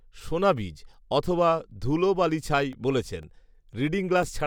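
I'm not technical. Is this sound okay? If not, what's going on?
No. Starting at about 2.73 seconds, just after "সোনাবীজ অথবা ধুলোবালিছাই", the speech gets a tick about every half second, roughly four in all, until about 4.23 seconds. These are periodic USB or driver dropouts: some background task on the computer briefly interrupts the audio connection at a steady rhythm, and each time roughly a millisecond of sound goes missing and is replaced by silence, which you hear as a click.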